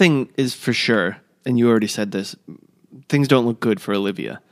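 No technical faults are audible.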